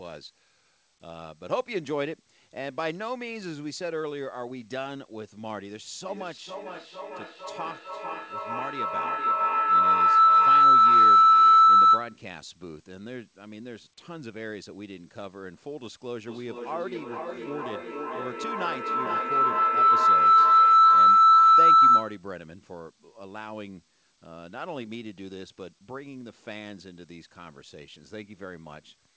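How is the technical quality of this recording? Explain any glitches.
The recording has two bursts of feedback howl, from 6.07 to 12.23 s and from 16.24 to 22.26 s. Its sound also tops out around 8 kHz, consistent with a wideband call codec.

Feedback howl: a shrill tone near 1.5 kHz swells to about 18 dB above the speech, pulsing roughly twice a second, as a microphone-to-loudspeaker loop between devices re-amplifies itself.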